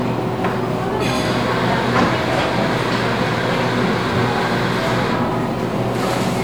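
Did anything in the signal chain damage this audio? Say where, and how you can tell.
Nothing in the signal chain damaged this audio, so there's no stage to point to.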